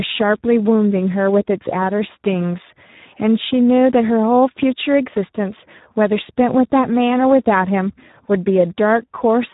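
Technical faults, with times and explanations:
Throughout, Speex codec: heavy CELP coding damage leaves the speech hoarse and noisy, which fits about 8 kbps, with nothing above 3.8 kHz.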